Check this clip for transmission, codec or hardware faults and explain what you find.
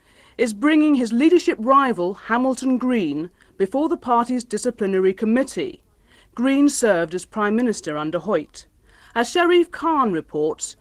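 Nothing stood out on listening to this clip.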